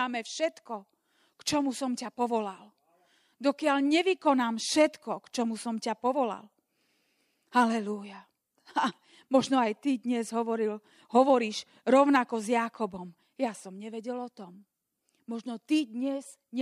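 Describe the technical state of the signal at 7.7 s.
At 7.7 s the speech signal is intact, with no audible fault at that moment.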